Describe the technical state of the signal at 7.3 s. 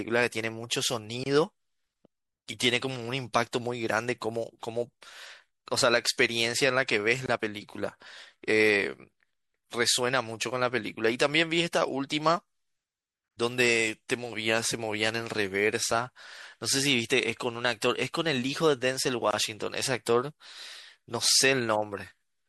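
At 7.26 to 7.28 s there is a gap at a join of encoded pieces: a 24 ms dropout in continuous speech, after which the sound resumes where it stopped. Separately encoded segments were joined without trimming the encoder's start delay and end padding, a join that recurs every 6 s. The waveform shows a short flat stretch with slightly smeared edges, and the spectrogram shows a thin vertical blank band across all frequencies.

Around that point, the speech also carries plainly audible MP3 compression, with a watery, swirly quality and smeared attacks. The amount of damage fits a rate near 64 kbps, and the likely cause is the encoder running short of bits. On a spectrogram this appears as speckled, flickering gaps where weak frequency lines switch on and off from frame to frame.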